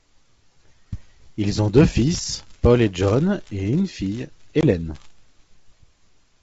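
Packet loss on an ADPCM call occurs between 4.61 and 4.67 s, just after "et une fille". About 20 ms of audio, roughly a couple of packets, is missing and replaced by a hard-edged silent hole. The decoder's adaptive predictor and step size lose track of the sender's during the gap, so the speech comes back with some slight distortion before settling. The surrounding G.722 wideband sound at 64 kbit/s stays clear.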